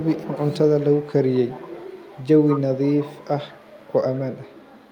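At 0.0–0.1, 0.79–1.14, 1.31–3.26, 3.51–3.96 and 4.13–4.91 s, a faint echo leak trails the speech by 188 ms, likely from an incompletely cancelled loudspeaker. Spectrograms show faded, shifted copies of the harmonics.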